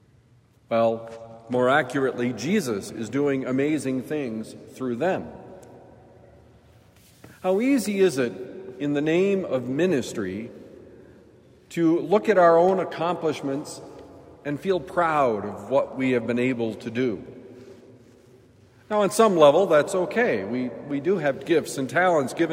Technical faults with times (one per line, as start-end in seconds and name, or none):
12.69 block of digital silence